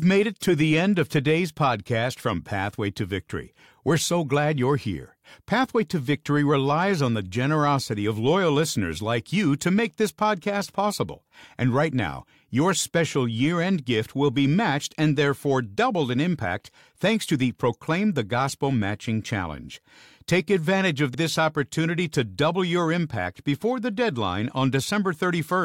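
At 21.13 s, repeated frames replay a 46 ms block as a quick stutter; the waveform shows that identical shape twice, which fits two duplicated compressed frames.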